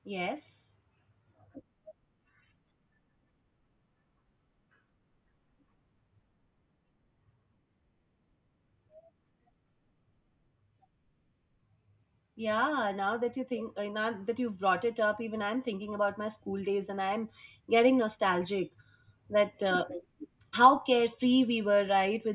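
Nothing stood out as a technical fault on listening to this speech recording.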